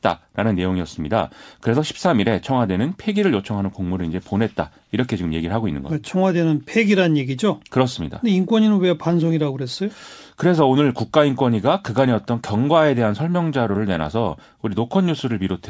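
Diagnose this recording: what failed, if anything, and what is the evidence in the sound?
Call processing failed briefly with an echo leak: from 12.22 to 12.26 s a very faint copy of the speech reappears about 395 ms late. It is likely a far-end loudspeaker residue that the echo canceller missed. Unlike room reverberation, it is a distinct delayed repeat, not a smooth decay.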